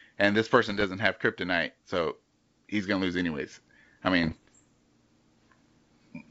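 Bit errors on an ADPCM link hit twice, from 0.70 to 0.85 s, between "and this" and "have kryptonite so he's", and from 4.24 to 4.64 s after "gonna lose anyways I". Each flipped bit corrupts the decoder's step size and predictor, so the speech breaks into pops and rough, level-jumping bursts.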